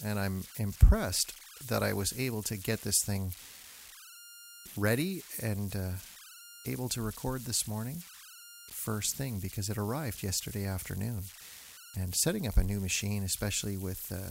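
Throughout the speech, converter idle tones sit about 17 dB below the signal. At low levels an undithered delta-sigma converter falls into repeating bit patterns, leaving a whistle around 1.5 kHz in pauses and grain under quiet syllables. Unlike fixed interference, its pitch depends on the converter's input offset.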